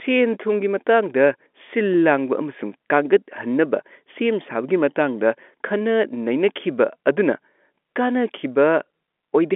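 Nothing stood out on listening to this speech, which comes across as an ordinary telephone line.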